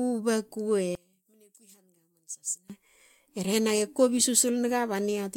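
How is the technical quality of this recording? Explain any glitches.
The recording has one clear glitch. From 0.95 to 2.70 s, one channel was likely inverted in polarity, so summing the two channels to mono cancels everything they share. The centred speech drops by about 16 dB, leaving only the faint difference between channels, before returning to full level.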